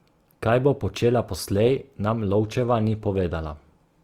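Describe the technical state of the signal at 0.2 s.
At 0.2 s, as throughout the clip, the speech has likely passed through Opus compression in its music mode at a rate that sounds near 24 kbps, leaving it plainly grainy, rough and noisy.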